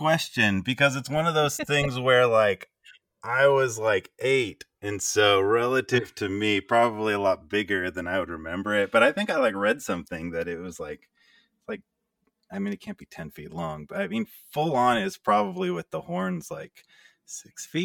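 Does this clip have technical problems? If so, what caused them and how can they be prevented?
Yes. The speech suffers from channels drifting apart throughout. The two channels run on separate clocks that disagree by roughly 300 ppm. Their offset grows to around 7 ms. Summed to mono, comb notches sweep slowly, giving a slow flanging. Lock both devices to one shared word clock.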